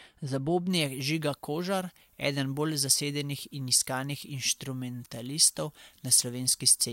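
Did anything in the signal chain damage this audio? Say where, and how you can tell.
Yes. From 0.70 s to the end of the speech, the pre-emphasis was left on: the treble lift of an FM-style 75 µs curve was applied at the transmission or capture stage, but the matching de-emphasis never followed. The uncorrected curve leaves the treble about 14 dB hotter at 10 kHz than at 1 kHz. That is why the sound turns thin, glassy and sharply sibilant from that point on, with the body of the voice receding under exaggerated high-frequency detail.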